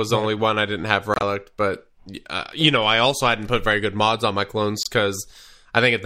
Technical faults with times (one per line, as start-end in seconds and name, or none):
1.14-1.23 corrupt frame muted
4.83-4.88 corrupt frame muted